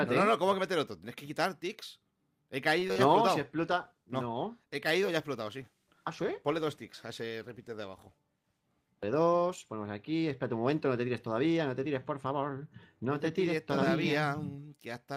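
Around 2.79 to 2.84 s the audio holds a sound about 22 ms too long, a short stall from a late packet: nothing is lost, and playback resumes 22 ms later. Two short concealed packet losses follow at 2.88 to 2.91 s and 2.93 to 2.98 s, each dropping about 20 ms of real audio and patching it with a synthesized smear, so content is lost rather than merely delayed. From 3.40 to 10.38 s a call bitrate drop from 64 to 23 kbps, at its lowest for about 5.7 s, makes the sound rough and muffled throughout, a sustained loss of detail rather than brief glitches.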